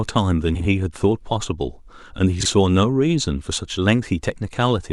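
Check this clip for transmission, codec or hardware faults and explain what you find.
Two short stretches of frames out of order, from 0.54 to 0.66 s and from 2.40 to 2.46 s. In each, two neighbouring blocks of frames reached the decoder swapped and were played that way. The blocks are 52.2 ms in the first event, which fits two frames per block, and 26.1 ms in the second, which fits one. With the halves exchanged, the speech turns briefly into a garbled flutter. No time is lost.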